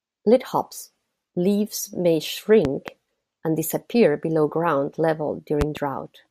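A sudden voltage step, likely from a plug, switch or static discharge, hits this speech clip twice, causing a loud pop, each a double pop: at 2.65 to 2.91 s, peaking around 10 dB above the speech, and at 5.61 to 5.80 s, around 15 dB above it, with the speech continuing underneath.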